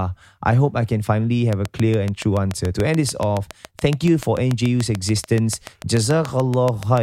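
From 1.53 to 6.99 s, regular ticking at 6.98 clicks per second sits about 10 dB above the speech: a train of clicks, likely from interference.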